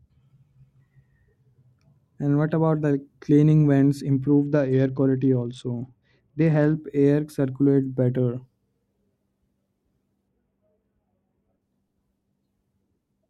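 From 4.25 to 6.76 s, after "cleaning vents", the treble dulls and a gritty noise rises. It clears before "air circulate better". It returns from 10.28 to 11.62 s. Both are a Bluetooth SBC bit pool drop. The encoder starved the upper sub-bands of bits and quantised the rest coarsely, which fits a bit pool cut to about 78 kbps.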